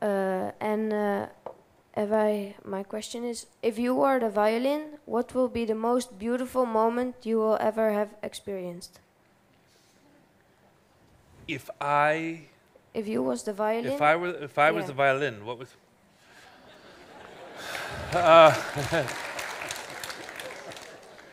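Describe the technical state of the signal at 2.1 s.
At 2.14 s there is a single sharp click, a thin vertical line across the spectrum. It is likely caused by dropped samples: a fraction of a millisecond of the stream goes missing, so the waveform jumps abruptly to a later value. Too little is lost to remove any audible sound.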